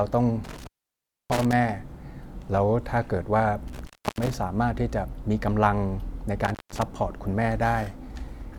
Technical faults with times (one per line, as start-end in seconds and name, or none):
0.44-1.53 intermittent contact
3.68-4.36 intermittent contact
6.45-6.83 intermittent contact